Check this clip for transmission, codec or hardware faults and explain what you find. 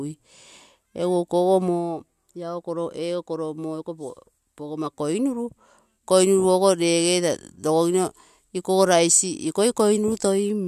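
Nothing faulty can be heard anywhere in this speech.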